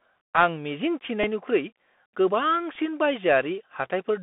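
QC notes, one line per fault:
throughout, Bluetooth CVSD headset codec: The link runs the narrowband headset codec, a one-bit delta modulator whose step size adapts as it follows the waveform, which fits 64 kbps CVSD. The passband sits between 200 Hz and 3.5 kHz, so the speech sounds thin and boxy. Where the level climbs quickly the step can't keep up and the speech distorts. S sounds come out scratchy, and a grainy hiss runs underneath. The damage is plainly audible.
1.23 s and 2.75 s, Bluetooth headset packet repeated: Each time, about 3.8 ms of audio was lost on the headset link, which fits a single dropped voice packet. The chip filled the hole by decoding the previous packet's bits a second time. With only one repeat at each point, no run forms and no steady buzz builds up. Each repeat is heard as a small, brief tick in the speech rather than a silent gap.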